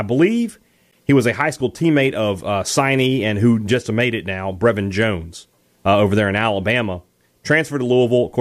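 A short glitch breaks into the speech from 0.91 to 0.95 s, just before "he was a high". It comes from damaged data in a compressed stream: corrupted bytes made the decoder misread those frames and lose sync until it found a valid header.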